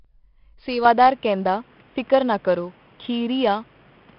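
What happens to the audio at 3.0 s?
At 3.0 s you're inside a stretch that began at 0.85 s and runs to the end of the clip, where the sound has gone narrower and boxier. Nothing reaches above about 3.8 kHz, the level has shifted by around 5 dB, and there's a different background noise sitting roughly 35 dB down. There was no gap at the change. That's likely the input switched to a poorer device, such as a headset's call mode.

Under that, and across the whole clip, there's 4-bit ADPCM compression. Each sample is coded as a small step off a prediction, so the error turns into a gritty hiss that rises and falls with the speech, and sharp onsets smear because the step size can't grow fast enough. The damage is heavy here, and there's nothing above about 5.4 kHz. At 44 kbps, that fits a sample rate near 11 kHz.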